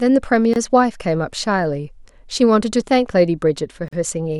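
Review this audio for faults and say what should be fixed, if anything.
Two gaps at a join of encoded pieces break the speech, at 0.54–0.56 s (25 ms) and 3.88–3.93 s (44 ms). Separately encoded segments were joined with each one's start-up delay and last-frame padding left in. On a waveform each is a flat dropout. On a spectrogram it is a thin vertical blank band spanning all frequencies, with slightly smeared edges, after which the speech resumes where it stopped.

To prevent this, trim the encoder delay and padding from each piece before joining, or encode the audio in one continuous pass.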